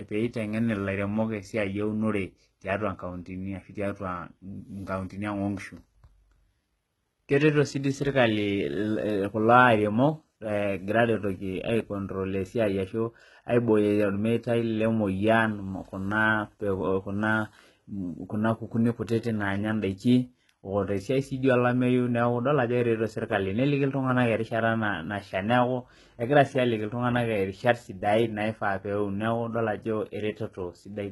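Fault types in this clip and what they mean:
HE-AAC compression: the speech sounds likely squeezed through a low-bitrate codec like 16 kbps HE-AAC, treble rebuilt from copied lower bands, s sounds gritty and lispy, nothing above 11.8 kHz.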